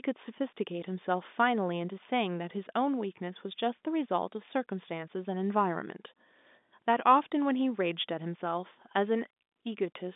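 No technical faults can be heard in this speech.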